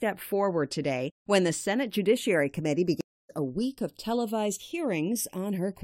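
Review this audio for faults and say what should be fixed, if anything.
Channels drifting apart throughout: the two channels run on separate clocks, roughly 100 ppm apart, so their offset grows to about 0.4 ms, heard as slow flanging in mono. Lock both capture devices to a single word clock.

Stream reconnect from 3.01 to 3.31 s: a dropout of about 0.28 s, then a fresh decoder picks up roughly 0.2 s later, resuming at "a week of televised". Buffer more at the player and keep the connection alive.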